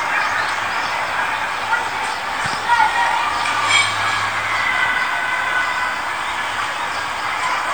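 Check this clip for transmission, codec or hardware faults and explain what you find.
No transmission, codec or hardware faults can be heard in these sounds. Nothing in the audio calls for correction.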